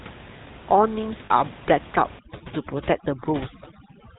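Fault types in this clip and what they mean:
GSM full-rate codec: throughout, the speech is squeezed through a vocal-tract model, with a pulsed excitation at about 13 kbps, leaving nothing above 4 kHz and a buzzy, gravelly roughness.
Lost GSM frames: at 1.26 to 1.31 s, about 40 ms, which fits two dropped frames, the last good frame's settings are repeated, heard as a brief metallic ring.
Overdone noise removal: from 2.19 s to the end, frequency bands near the room noise estimate are cut hard, so the background drops and breaks up into twinkling specks, and quiet parts of the voice go with them.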